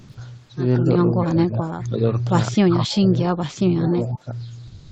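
The clip is speech carried over a call, with audio reaching up to 8 kHz. Sound dropped by the voice detector affects both ends. From 0 to 0.17 s and from 4.67 s to the end, the audio gives way to steady comfort noise. About 100 ms and 120 ms of real sound are lost. This is likely Opus discontinuous transmission treating the sound as background. Speech suppressed in double talk occurs from 1.19 to 2.03 s and from 3.87 to 4.29 s. The voice dips by roughly 15 dB and then 20 dB, for about 500 ms and 400 ms in total. The likely cause is the echo canceller turning everything down while both sides spoke. An echo leak appears at 1.83–1.87 s and 4.12–4.19 s. A faint copy of the voice returns 212 ms late, roughly 25 to 30 dB below the speech. This is likely loudspeaker pickup that one side's echo canceller failed to remove.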